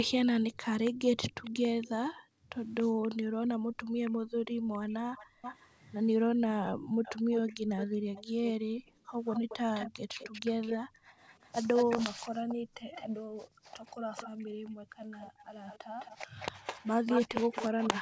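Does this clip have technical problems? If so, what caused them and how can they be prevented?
Yes, there are two kinds of trouble here.

First, an echo leak: you hear a delayed, quieter copy of the speech trailing behind it. It runs from 0.85 to 3.08 s, about 278 ms late and roughly 20 dB down. It comes back from 4.05 to 5.69 s, about 367 ms late and roughly 15 dB down. From 6.67 s to the end it sits about 210 ms behind and only around 10 dB down. The likely cause is that the far end was on a loudspeaker, and its echo canceller didn't fully subtract what its mic picked up, so the leftover got sent back. To prevent it, the far end should use a headset, or turn the speaker down and move the mic away from it.

Second, the background is gated by the echo canceller: the room sound ducks hard while the canceller clamps the mic, then returns. This happens between 2.12 and 5.42 s, with the deepest drop about 40 dB, and between 6.34 and 11.18 s and between 12.42 and 15.96 s, dropping about 28 dB each time. 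Each stretch adds up to roughly one and a half to two seconds of dips. The same fix applies here, since less speaker bleed into the mic means the canceller has no reason to clamp down so hard.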